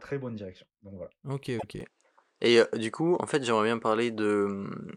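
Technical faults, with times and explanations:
1.58 to 1.64 s, repeated frames: one compressed block of about 26.1 ms gets played twice, so there's a tiny stutter where the same sliver of speech comes back right away. It's the kind of thing you get when a frame is written or sent a second time, and the decoder just plays it again. Everything after it lands 26.1 ms later than it should.
1.81 s to the end, input switched to a poorer device: the speech suddenly loses its top end, with nothing above 10 kHz, so it goes duller and a bit boxier. There's no gap at the changeover. The level also shifts a little, and a faint new background noise comes in, sitting well below the speech. A sudden change in band, level and noise floor together likely means the recording jumped to a different, lower-grade microphone or a headset call profile partway through.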